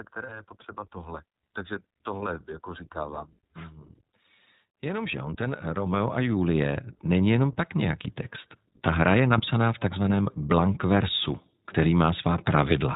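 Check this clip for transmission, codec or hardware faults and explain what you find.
Three faults are present: iLBC coding across the whole clip, one gain swell, and one brief dropout.

iLBC codec, throughout: the speech is band-limited below 4 kHz and sounds slightly rough and synthetic, which fits iLBC at 15.2 kbps coding each 20 ms frame independently.

Automatic gain rising, 4.8 to 8.12 s: the gain control judged the input too quiet and raised its gain gradually, so speech and background swell together by about 12 dB.

Lost iLBC frames, 9.38 to 9.42 s: a short held, buzzy vowel-like sound replaces the speech. The decoder repeated the last pitch cycle mixed with noise, which fits one lost 20 ms frame. Normal speech resumes almost immediately.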